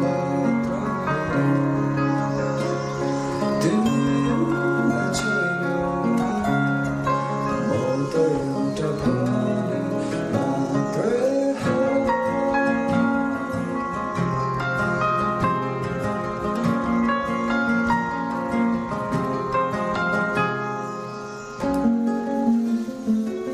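No technical faults are audible anywhere in this audio.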